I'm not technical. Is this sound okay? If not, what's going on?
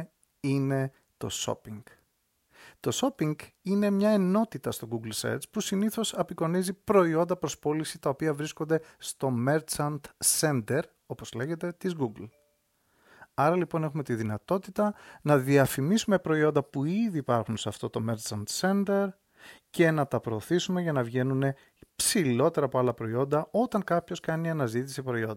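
Yes, no faults heard.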